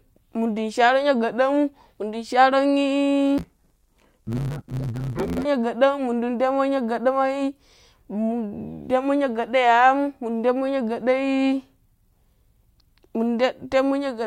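Speech clip; from 3.38 to 5.46 s the audio turns dull and robotic with a 100 Hz buzz, typical of interleaved audio read as planar in 10 ms blocks.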